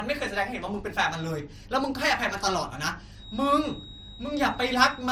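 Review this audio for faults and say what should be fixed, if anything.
Transcoding between lossy codecs runs through the whole speech clip. Smeared, swirly artefacts from two different codecs overlap, which fits an MP3 stage followed by Opus, the later one re-encoding the earlier one's errors. A spectrogram shows patchy high-band texture and nothing above 20.2 kHz. Encode once from the original source.

A feedback whistle starts at 3.12 s and lasts to the end: a thin, steady 3.8 kHz tone about 20 dB below the speech, swelling and fading slowly, likely from a loudspeaker-to-microphone loop held just at the feedback point. A spectrogram shows one horizontal line. Reduce monitor gain or add a notch filter.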